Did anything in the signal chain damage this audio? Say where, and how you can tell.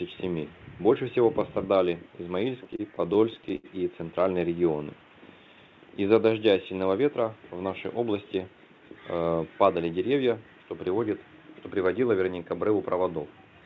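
Yes, there's a burst of repeated stalls (stutter) between 2.64 and 3.66 s, where the network fed the jitter buffer too slowly. It kept running dry and stretching the last sound, a dozen or so holds up to 82 ms, roughly a fifth of that second, dragging but losing nothing.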